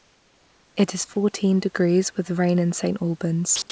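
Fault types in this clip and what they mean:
Comfort noise in place of the background: From the start to about 0.76 s, the room background gives way to a steady, featureless hiss about 3 dB quieter. The real background sits about 38 dB below the loudest speech, and its texture is missing here. The likely cause is a sender that stopped transmitting while no speech was detected. The receiver then filled the gap with synthetic noise shaped roughly like the room.
Sound dropped by the voice detector: Two brief stretches of speech vanish into that same smooth noise. The first is a 20 ms gap at 1.14 s, and the second lasts 60 ms, from 3.56 to 3.62 s. The speech returns immediately after each gap. These are likely quiet speech fragments that the sender's detector took for background. It stopped sending, and the receiver substituted comfort noise. The surrounding audio has nothing above 8 kHz, which fits a G.722 call codec.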